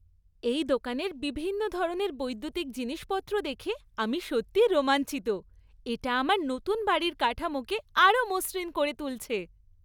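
No technical faults can be heard anywhere in this recording.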